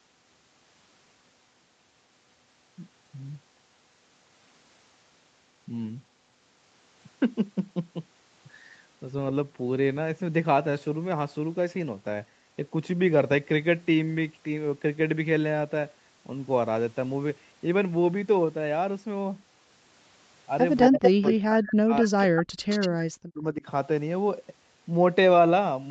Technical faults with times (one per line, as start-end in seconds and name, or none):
20.80-21.34 echo leak
20.89-22.19 speech suppressed in double talk
22.36-22.43 echo leak
22.53-22.57 background gated by the echo canceller
22.69-22.89 echo leak
23.14-23.66 speech suppressed in double talk